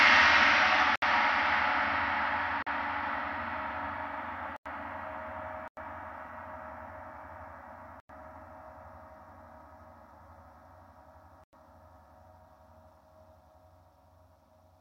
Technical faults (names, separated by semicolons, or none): block of digital silence